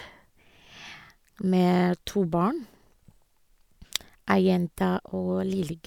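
No technical faults can be heard at any point in the speech, so there is nothing to place in time order.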